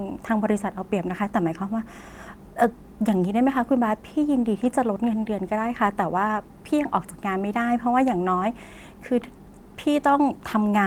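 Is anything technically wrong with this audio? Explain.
Yes. From 4.63 to 4.65 s, a lost packet rebuilt from error correction: the next packet's low-bitrate copy fills about 20 ms, sounding briefly rough and noisy, with no gap or smeared repeat.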